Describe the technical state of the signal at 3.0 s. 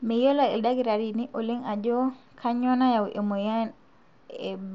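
At 3.0 s the signal is intact, with no fault present, the speech passing through the Bluetooth mSBC headset codec with its band ending near 7.7 kHz.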